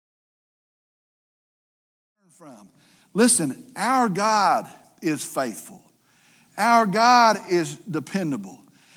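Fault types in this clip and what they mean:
The speech signal shows no technical fault, and its only level change is a deliberate, gradual rise at the opening from around 2 s to full level by 3.56 s, with no click or hard edge.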